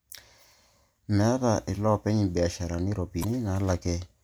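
At 3.20 to 3.25 s the speech is broken by a short burst of damaged data in a compressed stream, lasting about 40 ms. A stretch of the encoded bitstream there is corrupt, so the decoder cannot interpret those frames correctly, loses frame sync, and has to scan forward for the next valid frame header before normal decoding resumes. The result is a brief chirp, squawk, click or short hole in the speech.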